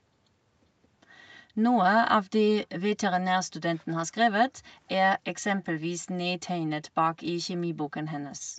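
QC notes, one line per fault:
5.60–5.64 s, echo leak: A brief, very faint scrap of the speech comes back, about 30 dB below the talker and trailing the original by roughly 0.4 s. It lasts only 40 ms, so it sounds like a ghostly flick rather than a clear repeat. The likely cause is a far end playing the call on a loudspeaker, where the echo canceller let a fragment of its microphone pickup slip back into the call.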